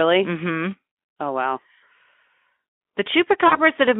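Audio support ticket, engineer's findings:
VoIP packet loss concealed by the speech codec, 3.47–3.59 s. About 40 ms missing, consistent with two lost 20 ms frames. The Speex decoder extrapolates from its last pitch and filter state, producing a buzzy or noise-like, fading tail with weak recovery. A plain dropout would give silence or a click instead.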